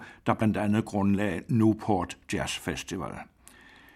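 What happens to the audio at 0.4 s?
At 0.40 s, just before "andet grundlagde", compressed frames are skipped: a couple of 21.3 ms frames never play, so the speech jumps ahead by about 40 ms. The join where the missing audio is cut out is heard as an abrupt jump in the speech.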